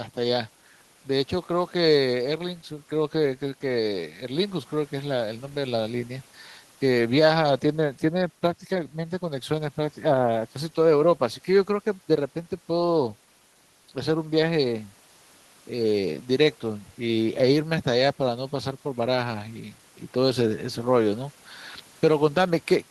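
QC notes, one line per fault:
No faults found in this speech clip. Nothing here needs a marked time or range.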